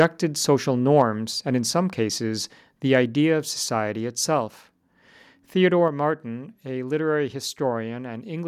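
A harsh, crackling edge sits on the very start of the speech, from 0.00 to 0.04 s, where the loudest peaks sound flattened and gritty instead of rounded. That is microphone overload: the input level was likely set high enough that those peaks ran about 2 dB past the converter's ceiling, so their tops were sheared off on a small share of the samples, adding hard-edged distortion. At 5.88 s the whole signal, voice and background together, drops abruptly by about 4 dB in a single step and stays lower. That is the microphone volume stepped down, most plausibly call software reacting to a hot input and lowering the device's input volume at once, instead of a gradual fade.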